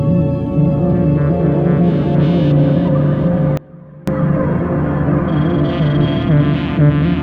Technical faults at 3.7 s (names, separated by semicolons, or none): sudden gain jump